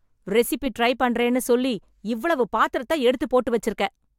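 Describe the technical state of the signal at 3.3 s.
At 3.3 s the signal is intact, with no dropout, distortion, glitch or other fault at that point.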